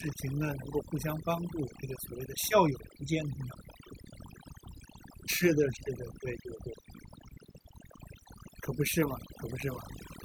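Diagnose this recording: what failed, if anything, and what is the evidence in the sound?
Overdone noise removal at the call-processing stage runs throughout: the background drops and breaks up into twinkling specks, and quiet bands of the speech are gated away with it.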